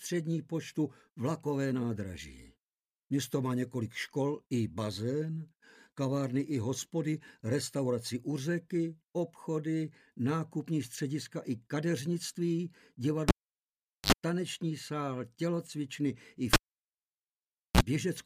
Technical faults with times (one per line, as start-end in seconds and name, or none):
13.28-14.12 cable pulled and plugged in
16.53-17.81 cable pulled and plugged in